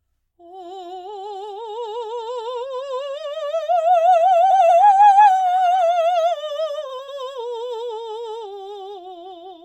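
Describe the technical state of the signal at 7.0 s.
At 7.0 s the music hits frames out of order from 6.89 to 7.09 s: two 93 ms blocks play swapped, giving a brief garbled flutter.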